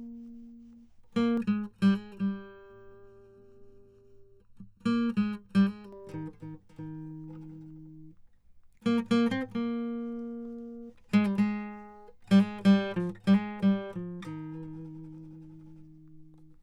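From 1.37 s to 5.93 s the music shows channel delay (comb filtering): one channel arrives late by under a millisecond, and when the two are summed to mono, shared content cancels at evenly spaced frequencies starting around 700 Hz, leaving a hollow, phasey tone.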